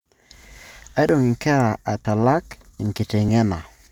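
Likely dropped buffers (overrun) overwrote samples before they were collected, so the speech skips ahead at 1.09 s (about 40 ms lost), then at 2.05 s and 3.29 s (about 20 ms each).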